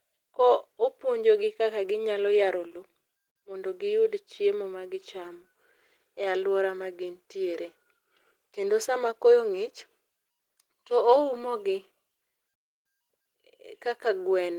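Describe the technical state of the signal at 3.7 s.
At 3.7 s the speech signal is intact, with no audible fault at that moment.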